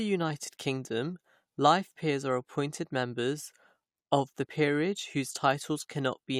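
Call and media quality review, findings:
Compressed frames skipped at 4.45 s, just before "peerage whose": speech jumps forward by about 20 ms. Gap fits about one dropped frame of 21.3 ms.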